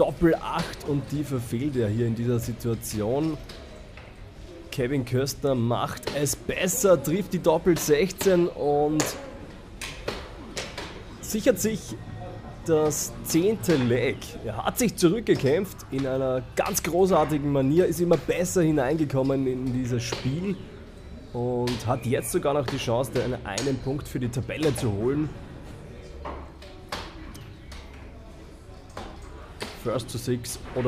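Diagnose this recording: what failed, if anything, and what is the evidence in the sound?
Nothing in the recording stood out as a failure on listening.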